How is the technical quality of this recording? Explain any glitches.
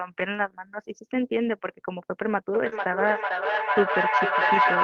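The recording has three real problems, all bunched into the second half, from about 2.5 s to the end.

Feedback echo between two devices runs from 2.53 s to the end. Two devices in the same room are on the call, and one is playing back what the other's mic sent. That mic picks it up again, and neither echo canceller catches it, because each only cancels its own playback. Each bit of speech comes back roughly every 0.4 s. The loop is hot, so the repeats stack up instead of fading, peaking at about 6 dB above the speech itself.

Short concealed packet loss hits from 2.69 to 2.73 s. About 20 ms of audio never reached the decoder in time, so the receiver filled roughly 21 ms by extending the last sound it had, either following its pitch or using shaped noise, before crossfading back into the real signal. What you hear is a brief smear or wobble right there, and a quick consonant in that spot could get swallowed.

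A lost packet rebuilt from error correction sits inside that same patch, at 2.71 to 2.73 s. One 20 ms stretch, which points to a single lost packet, was rebuilt from the low-bitrate backup copy that Opus tucks into the following packet. Because of that there's no hole, but the rebuilt bit is rougher and noisier than the audio around it. If the call is full-band, the top end also dips, since the backup copy doesn't carry those frequencies and they have to be estimated.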